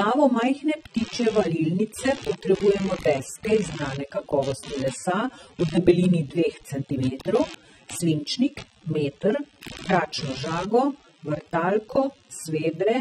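A speech clip with two faults running from start to finish. Computer activity noise sits under it throughout. It is a rough buzz pulsing around 70 times a second, roughly 20 dB below the speech. It rises and falls with the computer's load, not with the talking, because processor and graphics activity disturb the audio circuit's shared ground. There is also plainly audible codec damage. The speech sounds dull and smeared, with a warbling, fizzy edge on sibilants, and nothing remains above 15.7 kHz. The likely cause is AAC compression at a low bitrate, something near 24 kbps, which cuts the top band and leaves spectral holes.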